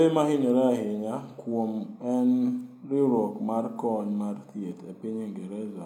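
At 1.29 s, AAC frame loss with concealment sets in for about 43 ms, which fits a single lost frame. The decoder rebuilds the gap from the previous good spectrum. The patch sounds briefly smeared, noisy or phasey, until 1.34 s.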